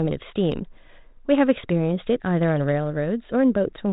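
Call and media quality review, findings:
Nothing stands out as a fault here; the speech comes through with no dropouts, glitches or distortion worth logging.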